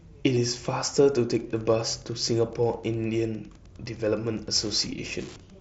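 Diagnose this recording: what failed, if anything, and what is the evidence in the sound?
Concealed Bluetooth headset packet loss at 0.35 s and 4.91 s, on the wireless link between headset and phone. About 15 ms, then 7.5 ms, went missing, consistent with two mSBC frames and then one. The receiver filled each gap with matching recent waveform, leaving the single lost frame nearly hidden.

Wi-Fi interference from 1.32 s to the end, entering through the analogue wiring. A steady tick repeats every 102.4 ms, about ten times a second, sitting roughly 30 dB below the speech. A nearby Wi-Fi radio's beacon bursts are being rectified by the audio circuit and heard as clicks.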